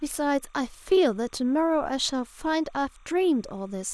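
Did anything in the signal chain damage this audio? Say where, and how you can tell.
Yes, timecode bleed in the analogue wiring: linear timecode from a neighbouring track or cable is crosstalking into the speech path for the whole clip. The code's square wave flips between two pitches, around 1 kHz and 2 kHz, as it encodes each frame, and its repeating pattern fits 30 frames per second. It sits well below the speech, roughly 35 dB down, as a faint, steady chirping warble behind the talking that never stops between phrases.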